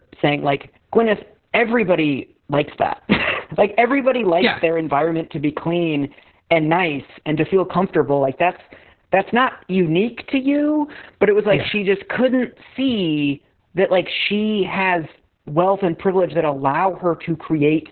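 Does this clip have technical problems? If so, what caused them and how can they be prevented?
Yes. Opus voice compression runs throughout: narrowband SILK coding cuts the band to 4 kHz and coarse excitation makes the speech muffled, hoarse and robotic, consistent with roughly 6 kbps. Encoding at a higher bitrate, with wideband or fullband enabled, prevents this.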